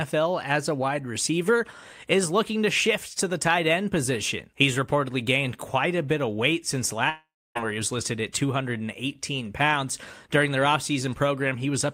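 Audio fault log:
7.09–7.57 s, long network dropout: the stream likely stopped delivering packets for close to half a second, so the receiver had nothing to play and kept stretching out the last bit of speech it had. That comes through as a brief buzzy tail fading away, followed by roughly 0.28 s of silence. When the speech resumes at 7.57 s, about 0.46 s of it is simply missing, so the sentence jumps ahead with a gap.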